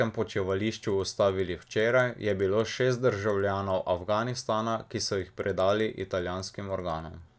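Throughout, the resampler restarted on every block: each 100 ms block was converted from 48 kHz to 16 kHz in isolation, so its edges lacked the true neighbouring samples and carry a small error. This is heard as steady ticks at 10 Hz, present only while speech is.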